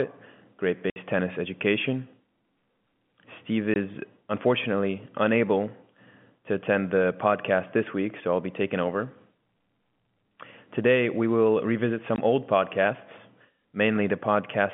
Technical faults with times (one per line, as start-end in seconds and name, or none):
0.90-0.96 packet loss filled with silence
3.74 packet loss filled with silence
12.16 packet loss filled with silence